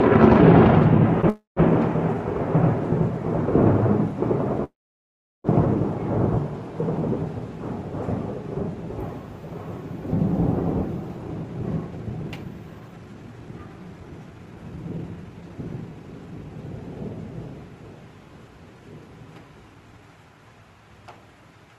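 A short stall from a late packet comes first, at 1.21 to 1.26 s. One packet missed its playout moment and the jitter buffer briefly ran dry, so the receiver held the preceding sound for 18 ms until the data turned up, then carried on from the same point. Nothing is lost, but that instant is drawn out, with a faint buzzy dip and an 18 ms delay added from then on.

A call audio freeze follows at 1.29 to 1.59 s. The sound stops moving and the last fragment is extended as a fading buzz that dies to silence for about 150 ms. The 273 ms inserted gap is likely caused by packets held up in transit, which left the buffer empty. When they arrived, the sound resumed where it had stopped, so no content is missing. A second call audio freeze runs from 4.64 to 5.47 s. This one is longer: the held sound fades almost at once, and about 740 ms of silence follows. In total 800 ms is inserted before the sound picks up again without a skip.

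Jitter buffer speed-up runs from 11.09 to 16.58 s. The buffer held more audio than it aims for. To shrink that backlog, the receiver removed many short slices of one or a few pitch periods in a row, trimming roughly 0.7 s in total. The sound plays at 115% speed with its pitch unchanged, so events crowd together and feel rushed. A brief second speed-up at 19.74 to 19.99 s runs at 117% and removes around 50 ms. Through all of this, the call codec's band limit is audible as top end rolling off near 12 kHz, consistent with an Opus stream at around 32 kbps.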